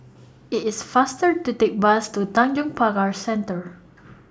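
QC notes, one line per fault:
No faults heard.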